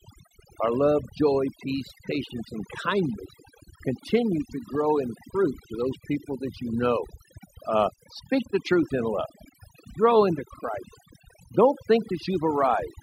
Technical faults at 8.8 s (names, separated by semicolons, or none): overdone noise removal